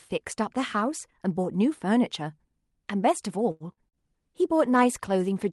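At 3.51 s a packet arrives late in this speech, leaving the jitter buffer empty: a short stall from a late packet. The receiver holds the last sound for about 88 ms until the data turns up, then carries on from the same point. Nothing is lost, but the sound in progress is drawn out unnaturally, with a faint buzzy sustain until 3.63 s. Playback now runs about 88 ms further behind than before.

Shortly after, from 3.72 to 3.80 s, comes a burst of packet loss. Audio that never arrived in time for playback forces the receiver to extend the last sound for about 45 ms, fading it as the gap continues. Playback then resumes about 80 ms further into the stream, so that stretch of sound is simply skipped. The skip also pulls the delay back by about 35 ms. It is heard as a brief held, decaying buzz or hiss followed by an abrupt jump.

From 3.89 to 3.96 s there is a short concealed packet loss. About 40 ms of audio fails to reach the decoder in time, and roughly 39 ms of synthetic continuation, built from the preceding sound, is blended back into the real signal. 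The result is a quick smear or wobble in which a short consonant can drop out.

Overlapping that, from 3.93 s to the end, there is a call bitrate drop. The bandwidth estimate collapses and Opus is pushed from 64 kbps down to 24 kbps, staying at that lowest rate for about 1.36 s. Before the drop, the call path delivers speech with content up to about 12 kHz. After it, coarser coding makes the voice rougher and more watery for the rest of the clip.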